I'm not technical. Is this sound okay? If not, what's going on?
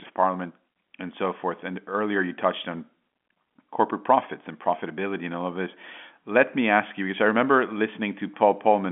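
Yes, this speech recording is technically sound, with nothing wrong to point to; it has the ordinary narrow, slightly boxy quality of a standard landline telephone call, which carries nothing above about 3.8 kHz.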